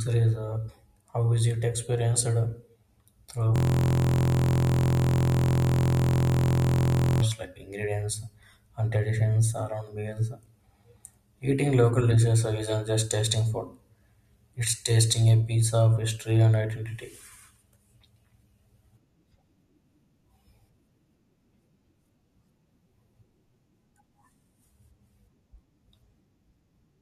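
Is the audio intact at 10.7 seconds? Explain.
Yes, the audio at 10.7 seconds is intact, with no audible fault at that moment.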